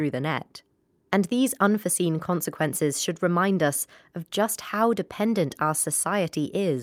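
Speech recording with no audible technical faults anywhere in the clip.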